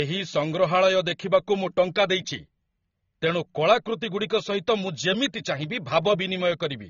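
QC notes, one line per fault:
Throughout, AAC compression: the speech has nothing above 6.9 kHz, sounding dull and smeared, with plainly audible warbling and fizz on sibilants. The likely cause is AAC-LC at a low bitrate, which fits about 24 kbps, quantising its frequency lines coarsely and dropping the top band.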